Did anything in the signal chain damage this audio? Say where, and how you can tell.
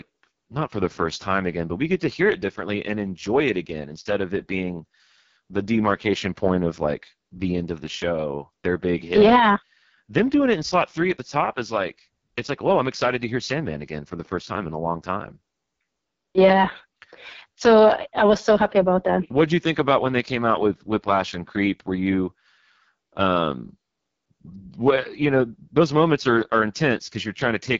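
Yes, at the codec stage: the AMR wideband (HD Voice) codec roughens the speech throughout, with a rasp that fits its lowest 6.6 kbit/s mode. Unlike a plain low-pass, the band reaches about 7.4 kHz, but the top is noise-filled and the voicing grainy.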